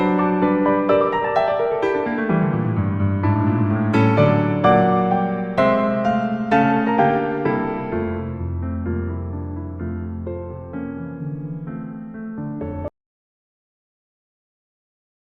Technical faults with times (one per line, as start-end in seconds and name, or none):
12.88-15.28 audio dropout to silence